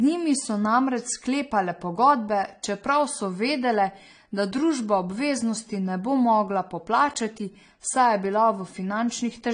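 Across the whole speech clip, nothing reaches above 9.6 kHz, and two distinct kinds of coding damage sit on top of each other and are heard together. That combination, rather than one uniform set of artefacts, is what separates transcoding between lossy codecs from a single low-bitrate encode. It likely comes from an MP3 copy re-encoded as low-rate AAC-LC, which spent its bits reproducing the earlier damage.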